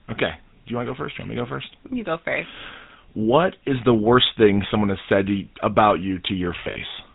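The whole recording has the buzzy, gravelly edge of the GSM full-rate codec, with nothing above 4 kHz, which fits the old 13 kbps mobile coding. From 6.64 to 6.81 s, lost GSM frames break in. About 100 ms goes missing in short gaps, the longest around 70 ms, and each gap is patched by repeating the last good frame, so the sound smears into a brief rough, metallic ring.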